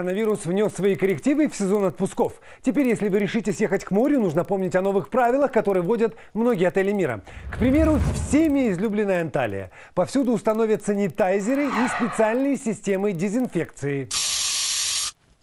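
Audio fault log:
throughout, resampler restarted on every block: the sample-rate conversion from 24 kHz up to 48 kHz was run afresh on each 50 ms block, with no memory of the block before or after, so at every boundary the interpolation filter worked from silence or from the block's own far end where its true neighbours belonged. Each seam is left with a small error, heard as a steady tick at 20 Hz that rides along with the signal and falls away when the signal does.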